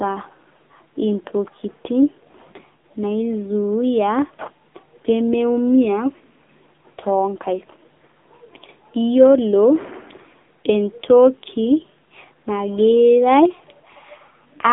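AMR narrowband mobile codec damage runs throughout this speech. The coder rebuilds the voice from a vocal-tract model and sparse pulses, leaving a 250 Hz to 3.6 kHz band, with nothing above 3.7 kHz. The heavy buzzy, synthetic coloration points to a low mode near 6.7 kbps.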